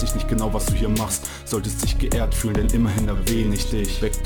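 Crude rate conversion runs through the whole clip. Samples were repeated rather than filtered, which fits a step from 44.1 kHz up to 48 kHz. The repeating error pattern adds inharmonic tones roughly 20 dB below the sound, heard as a gritty fizz tracking loud, bright passages.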